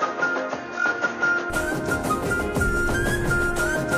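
From the start to 1.5 s the sound is dull and a bit boxy, with nothing above about 6.7 kHz, and there's a faint new noise floor sitting roughly 50 dB under the signal. At 1.5 s it opens up again with no gap and no real jump in level. That's the signature of the input switched to a poorer device, most likely a second mic or a headset's narrow call profile, before the system changed back.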